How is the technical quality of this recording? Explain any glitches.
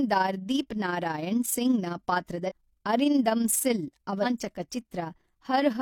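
The recording has one audible glitch. From 2.45 to 2.52 s, a short burst of roughly 60 ms, the speech is broken by a brief glitch caused by damaged data in the compressed stream. Corrupted bytes in the encoded file left the decoder misreading its frames, so it produced garbled output until it regained sync at a later frame header.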